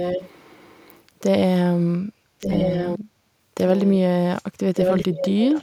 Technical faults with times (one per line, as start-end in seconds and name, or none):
0.00-0.99 echo leak
2.39-2.99 echo leak
3.59-3.94 echo leak
4.74-5.62 echo leak